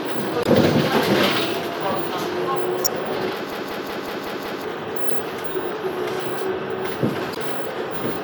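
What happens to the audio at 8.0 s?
Nothing goes wrong at 8.0 s; the sound carries on intact through that moment.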